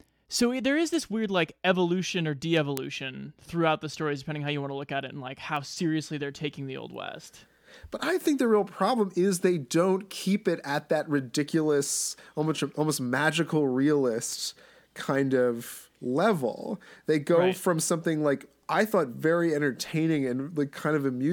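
Bit error spikes occur at 0.94, 2.77, 5.56, 8.21 and 14.33 s. Each is a single corrupted sample, where one flipped bit throws the value by a power of two before it snaps straight back. Each heard as a brief, broadband tick unrelated to the speech around it. Most peak at about -22 dBFS, the one at 14.33 s reaches about -16 dBFS, and the one at 2.77 s is loudest, at about -4 dBFS.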